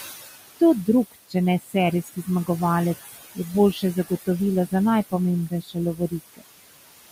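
Speech recorded over room noise sitting about 11 dB below the voice, with noise suppressor artifacts throughout. The suppressor pulls the background down by about 18 dB in the gaps, then lets it back up under each phrase, so the floor pumps in time with the speech. There is also speech cut by the noise suppressor: it misreads quieter speech energy as noise and gates it with the background. This happens between 0.48 and 2.49 s, with dips of up to about 21 dB adding up to a few tenths of a second; at 3.04 to 3.38 s, up to about 13 dB; at 3.73 to 4.28 s, up to about 19 dB; and at 5.49 to 6.42 s, up to about 20 dB, again totalling a few tenths of a second. In those spans soft consonants and word tails sound swallowed or faint.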